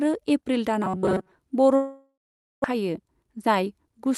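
From 0.84 to 1.31 s the speech turns into a rigid metallic buzz, the robotic sound from repeated short buffers. Its likely cause is audio arriving too seldom, so the receiver kept replaying a short slice, here about 5.3 ms long, which imposes a fixed 188 Hz pitch. Most of this stretch is repetition rather than new audio. On a spectrogram, flat, evenly spaced harmonics of 188 Hz replace the natural pitch contour. The waveform shows one identical short cycle copied again and again.

From 1.75 to 2.66 s comes a long network dropout, likely caused by a stall in packet delivery. The receiver fills roughly 0.89 s. It first stretches the last sound into a fading buzz, then leaves about 490 ms of silence. Around 600 ms of real audio is simply gone when the sound resumes. The waveform's amplitude decays to a flat line. The spectrogram shows smeared, blurred harmonics fading to near-empty bins. The network delay shifted by roughly 300 ms here.

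From 2.74 to 4.06 s a jitter buffer speed-up follows. The buffer was holding too much audio, so the receiver trimmed many short pitch-period pieces, around a tenth of a second in all. The speech plays at about 108% speed with its pitch unchanged and sounds hurried. On a spectrogram the syllables look compressed in time while the harmonic spacing stays the same. The waveform shows small splice points in voiced stretches. Across the clip, the Opus call path's upper edge at 12 kHz is visible as the spectrogram's ceiling.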